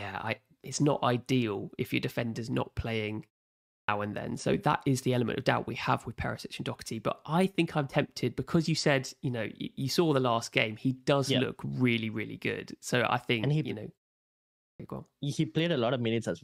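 At 3.71 s, after "your defender's not playing" and a pause of about half a second, the speech returns with its opening cut away until 3.88 s, so "and then" begins abruptly. At 14.62 s, after a 0.72 s pause, the same thing happens before "go on". This is a clipped start after a pause: the output device sleeps in silence and takes about 175 ms to wake, swallowing onsets.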